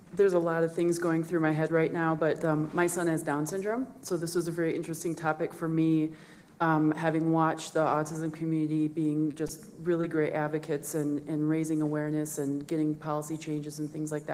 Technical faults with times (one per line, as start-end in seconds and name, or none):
9.31-9.35 short concealed packet loss
9.47-9.58 short stall from a late packet
10.01-10.05 short concealed packet loss